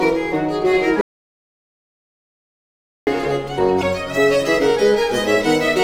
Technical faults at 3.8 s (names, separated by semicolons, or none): damaged data in a compressed stream